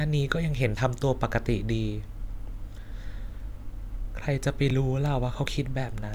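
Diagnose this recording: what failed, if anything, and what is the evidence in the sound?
Two breaks interrupt the speech, at 0.77 s and 4.70 s, each a slight jump forward in the sound with no gap. This points to a likely dropped buffer (overrun) at the driver or buffer stage. Roughly 10 ms, then about 5 ms, was overwritten before capture and the edges were spliced together.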